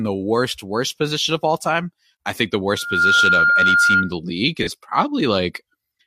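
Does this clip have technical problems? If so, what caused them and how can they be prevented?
Yes. From 2.70 to 4.14 s there is loudspeaker feedback squeal: a steady 1.4 kHz tone swells over about a third of a second to roughly 5 dB above the speech. The microphone is picking up its own loudspeaker, and loop gain exceeds one at that frequency. On a spectrogram it shows as a bright horizontal line. Moving the microphone away from the speaker or notching 1.4 kHz would prevent it.

At 4.62 to 4.69 s there is AAC frame loss with concealment: a smeared or noisy patch about 43 ms long, which fits one lost frame that the decoder rebuilt from the previous spectrum. A spectrogram shows a blurred, uniform block breaking the speech harmonics. A more reliable transport link or error protection would prevent it.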